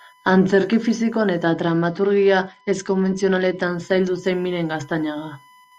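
A steady USB whine sits under the speech for the whole clip. It is a fixed tone at 1 kHz, roughly 35 dB below the speech. The bus draws current in 1 ms frames, and that pulsing leaks into the audio path through power or ground.

From 1.48 s to 3.63 s, a Bluetooth SBC bit pool drop dulls the treble and adds a gritty, coarse noise. The speech clears again just before "zaildu zen". The sound fits the bit pool falling from 31 to 10, near 77 kbps, which starves the upper sub-bands.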